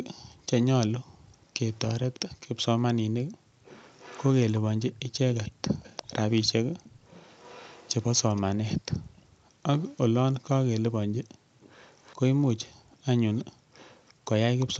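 From 1.7 to 2.2 s, 3.64 to 8.42 s, 9.79 to 10.0 s and 11.6 to 14.66 s an echo leak trails the speech by 0.35 s. It is most audible in the first half, about 20 dB down, and fainter later. Likely a far-end echo canceller letting loudspeaker pickup through. It is a distinct delayed copy, not diffuse room reverb.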